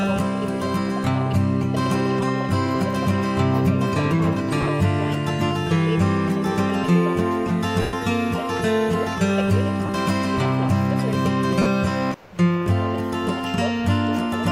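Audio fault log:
4.61–4.69 s, lost LE Audio frames: about 50 ms of gaps scattered over 80 ms, the longest about 20 ms. The LC3 decoder fills each gap by repeating the last good spectrum with randomised signs, so tones smear briefly into noise.
7.82–7.93 s, lost LE Audio frames: a single 110 ms loss. After the first few repeated frames the concealment fades, so the smear dies away toward silence before the signal returns.
9.86–9.89 s, lost LE Audio frames: 30 ms of noisy smear, which fits three 10 ms frames.
11.62–11.66 s, lost LE Audio frames: 40 ms of the same smeared concealment.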